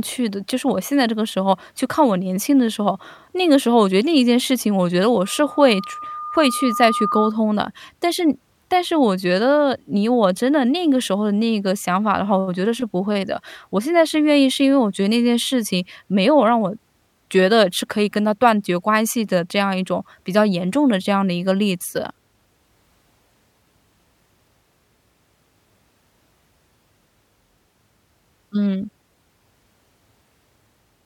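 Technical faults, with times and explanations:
5.24–7.37 s, loudspeaker feedback squeal: a steady tone near 1.2 kHz rises out of the speech and swells over roughly two seconds until it is about as loud as the talker. The microphone is picking up the loudspeaker it drives, and at that one frequency the round-trip gain exceeds unity, so each pass through the loop reinforces the tone. It grows by itself until the squeal stops at 7.37 s.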